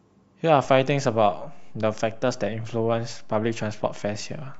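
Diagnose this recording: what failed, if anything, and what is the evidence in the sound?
A DC step at the converter or analogue input stage: at 0.64 s the waveform's zero line jumps by about -37 dBFS and stays offset through to the end. The jump is heard as a single low thump or click while the speech continues unchanged, consistent with a recalibration or an offset input being switched in.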